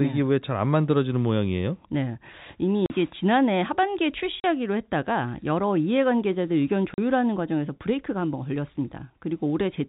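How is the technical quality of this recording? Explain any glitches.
The recording, carried over G.711 telephone coding with nothing above 4 kHz, has three short dropouts. At 2.86, 4.41 and 6.94 s, the speech cuts to hard-edged silence for about 40 ms. This is packet loss filled with silence, likely two 20 ms packets each time.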